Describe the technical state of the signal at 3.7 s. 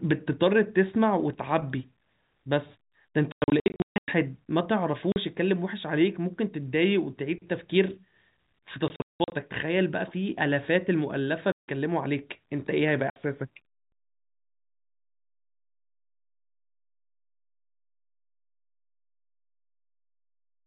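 At 3.7 s the speech sits inside a burst of packet loss filled with silence running from 3.32 to 4.08 s. About 540 ms is missing across those 760 ms, in gaps up to 140 ms that fit 20 ms packets. Unlike concealment, which smears or repeats sound, these holes are dead silent with hard edges.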